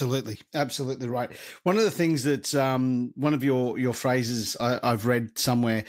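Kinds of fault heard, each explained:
No kinds of fault are heard in this speech clip.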